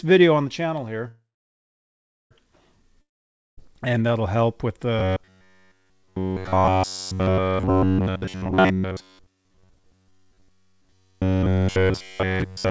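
At 1.08 s the audio halts in a call audio freeze lasting until 2.33 s. The last sound smears into a fading buzz, then roughly 1.07 s of silence. Delayed packets likely emptied the jitter buffer. Playback resumes where it stopped, so 1.23 s of gap is added and nothing is lost.

From 3.01 to 3.59 s a long network dropout occurs. A brief fading tail gives way to about 0.53 s of silence, and when sound returns it has jumped ahead by roughly 0.56 s. That stretch likely never reached the receiver and was never played.

From 4.99 s to the end, the speech turns into robotic sound from repeated short buffers: a rigid, metallic 93.8 Hz buzz that only loosely tracks the speech. The fixed pitch fits a repeated segment of about 10.7 ms, likely caused by audio arriving too seldom and the last buffer being looped over nearly everything.

Within that stretch, from 8.01 to 11.01 s, a jitter buffer speed-up plays the audio at 141% of normal speed without changing pitch, so it sounds hurried. 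About one and a half seconds of pitch-period slices are cut to drain an overfull buffer. Throughout, the G.722 call path leaves nothing above 8 kHz.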